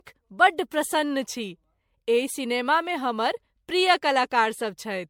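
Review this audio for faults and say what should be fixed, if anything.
Generation loss runs through the whole speech clip. The sound is swirly, smeared and hollow, and attacks blur. Nothing is present above 19.7 kHz. This likely comes from about seven MP3 passes near 96 kbit/s, each requantising on a shifted frame grid. Encode once from the original source.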